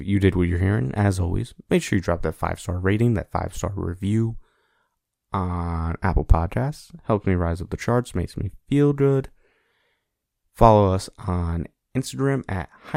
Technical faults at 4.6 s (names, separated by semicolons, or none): none